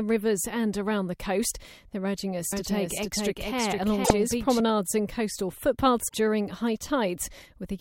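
Just after "urging us", at 2.52 s, the speech suddenly gains an exact second copy trailing about half a second behind, roughly as loud as the original and with no added room tone, so every phrase is heard twice until the echo cuts off abruptly at 4.60 s, just before "and coastal". This is a doubled audio track, likely from the same signal being picked up again through a slower path and mixed back in, or from an edit leaving two out-of-step copies. Inside that doubled stretch, from 4.01 to 4.11 s, a short glitch breaks through. It returns after "and coastal" from 6.05 to 6.14 s. Both are damaged data in a compressed stream: corrupted bytes made the decoder misread frames, lose its place and hunt for the next valid frame header, giving a brief glitch where clean audio should be.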